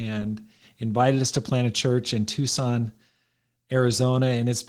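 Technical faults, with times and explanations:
Throughout, Opus voice compression: the speech sounds plainly hoarse and slightly robotic, with a grainy, thinly coded top, though content still reaches about 20.3 kHz. Below 8 kHz the voice comes from coarsely coded linear prediction, with a sparse transform layer above, consistent with about 16 kbps.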